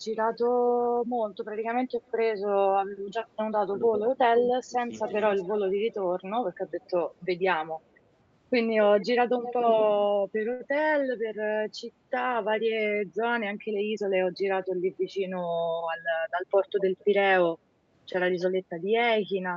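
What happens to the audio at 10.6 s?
At 10.53 s a packet arrives late and the jitter buffer runs dry. The result is a short stall from a late packet, lasting until 10.62 s. The receiver fills the gap by stretching the last bit of sound for 64 ms. Then it resumes from the same point once the packet arrives. Nothing is lost. The sound is simply held too long, with a faint buzz or dip. Playback now runs 64 ms later than before.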